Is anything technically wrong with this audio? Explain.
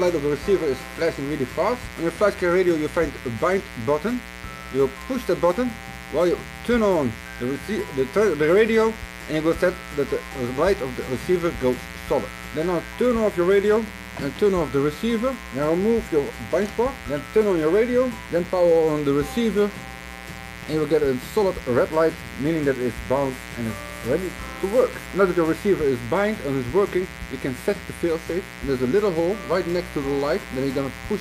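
Yes, a mains buzz runs through the entire clip. Spikes repeating 120 times a second, twice per 60 Hz cycle, add a raspy drone roughly 15 dB below the sound. A spectrogram shows stacked horizontal lines at 60 Hz multiples reaching several kHz, and the waveform shows regular sharp spikes.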